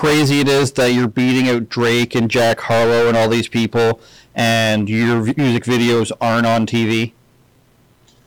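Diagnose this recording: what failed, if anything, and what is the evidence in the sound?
Hard clipping runs through the whole speech clip. The level was driven about 20 dB past what a converter or gain stage could pass. Roughly a third of samples hit the ceiling and are cut flat. Those flat tops add high harmonics, heard as harsh fuzz on every loud sound.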